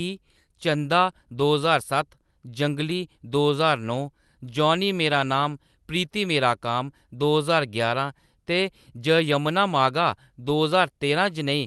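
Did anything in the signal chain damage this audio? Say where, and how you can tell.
No, no stage damaged it.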